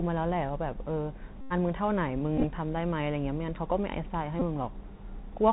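Bluetooth CVSD headset codec damage runs through the whole speech clip and is plainly audible. Each sample is coded as a single up-or-down bit at a 64 kbps rate, with a step size that keeps adapting, so everything above 4 kHz is gone and the sound is boxy and narrowband. Loud, bright passages outrun the step and break up, s sounds come out scratchy, and a granular hiss sits beneath the speech. Bluetooth headset packet repeats occur at 1.41 to 1.53 s, 2.37 to 2.45 s and 4.40 to 4.42 s. When packets between headset and phone are lost, the decoder plays the previous packet's bits again, roughly every 3.75 ms. At 1.41 s this creates a steady buzz near 267 Hz lasting about 94 ms. Around 2.4 s the losses are scattered over about 70 ms, with the longest unbroken run only around 15 ms, so the buzz is shorter and broken up. At 4.40 s a brief burst of about 19 ms is heard.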